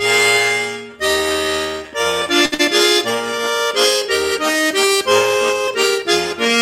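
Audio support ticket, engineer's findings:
Short stall from a late packet, 2.45–2.54 s: sound held about 66 ms with a slight buzz, then resumes exactly where it stopped, nothing lost. Jitter buffer ran empty while awaiting a late packet. Unlike loss, no skip follows; playout delay grows instead.

Burst of packet loss, immediately after, 2.54–2.61 s: last sound extended about 48 ms and fading, then a jump ahead with roughly 60 ms of audio gone. Concealment in receiver covering consecutive lost packets. Distinguished from the stall by the missing segment.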